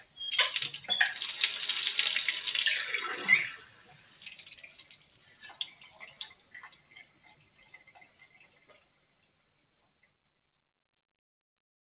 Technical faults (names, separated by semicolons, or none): noise suppressor applied to music or sounds; sound cut by the noise suppressor